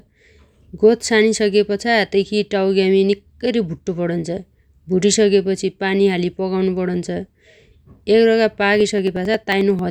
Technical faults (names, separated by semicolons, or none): periodic USB or driver dropouts